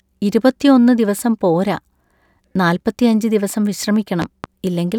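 Between 4.22 and 4.47 s there's a loud pop, really two sharp pops close together, jumping well above the speech while it carries on underneath. That's likely a voltage spike from a plug, switch or static discharge getting into the signal path.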